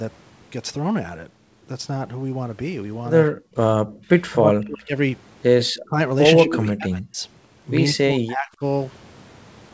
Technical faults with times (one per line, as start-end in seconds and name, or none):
3.29-3.56 background gated by the echo canceller
3.83-4.04 background gated by the echo canceller
4.32-4.97 speech suppressed in double talk
5.61-5.81 echo leak
5.84-5.98 speech suppressed in double talk
6.43-7.23 speech suppressed in double talk
6.50-6.69 echo leak
7.91-8.63 speech suppressed in double talk